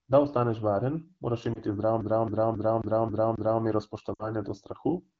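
Lost AMR speech frames at 1.53 to 1.61 s, just after "ostaneš varen moraš", and at 4.13 to 4.34 s, after "zdravo mero". Radio errors left frames that failed their checksum, so the wideband decoder repeated the last good pitch and vocal tract settings at falling gain. The first gap fits a single 20 ms frame and gives a brief dip or warble. The second, 60 ms long, fits three frames and drops to near silence before "do strahu in" returns weak or rough over the HD Voice sound, which is clear at 12.65 kbit/s.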